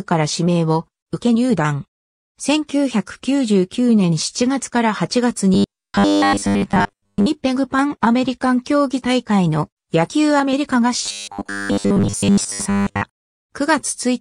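Audio apparently reached the player too seldom, so it likely filled the gaps by looping a short buffer, producing robotic sound from repeated short buffers from 5.54 to 7.27 s and again from 11.06 to 13.06 s. Most of the material in each stretch is repetition rather than new audio, and the loop rate imposes a fixed 100 Hz pitch, which fits a 10 ms buffer, turning the sound into a rigid metallic buzz.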